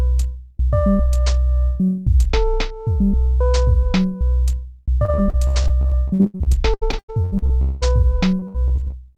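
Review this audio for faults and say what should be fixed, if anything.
There's repeated packet loss (robotic sound) from 5.05 to 7.83 s and again from 8.39 to 8.94 s. Lost packets get patched by stretching the last bit of sound, so it goes choppy with pieces missing. Gaps run up to 0.2 s. Worth fixing: a bigger jitter buffer or more stable network should stop it.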